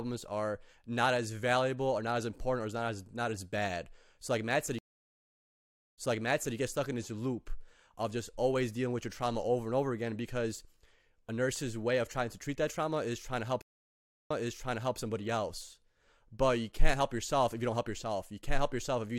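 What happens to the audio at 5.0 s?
At 5.0 s a stream reconnect runs from 4.79 to 6.56 s. The connection dropped, leaving 1.19 s of silence, then a fresh decoder resumed 0.58 s earlier, repeating audio before "you get stuck in". The waveform flatlines and the spectrogram shows a blank column before the audio fades back in.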